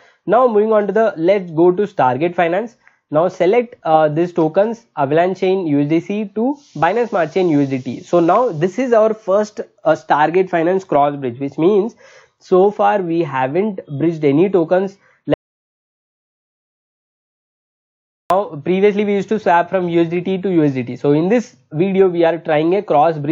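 At 15.34 s there's an audio dropout to silence: everything cuts to silence until 18.30 s, about 3 s lost, likely a dropped input link.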